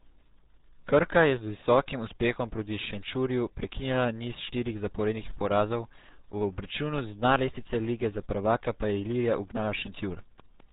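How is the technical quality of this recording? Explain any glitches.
The technical quality is poor. The whole recording carries heavy low-bitrate codec damage, and a short train of clicks sits near the end.

RealAudio 14.4 codec, throughout: the speech is muffled and gargly, with nothing above about 3.8 kHz. That fits RealAudio 1 at 8 kbit/s, a dial-up-era codec that keeps only a coarse model of the voice's spectral envelope and excitation. Fine detail is discarded, leaving a watery, buzzy texture. On a spectrogram, all energy stops at a hard ceiling just under 4 kHz, and the harmonics below it look smeared and blotchy.

Train of clicks, 9.12 to 10.61 s: a regular ticking of around seven near-identical pulses at about 4.7 per second. The peaks reach about 5 dB above the speech and can be heard over it and in any gaps. The likely cause is electrical interference from nearby equipment or a struggling interface injecting a pulse on a steady cycle. 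On a waveform, these appear as evenly spaced sharp spikes. A spectrogram shows thin vertical broadband lines at matching intervals.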